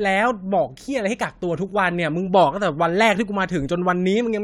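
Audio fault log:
No faults detected in this speech recording.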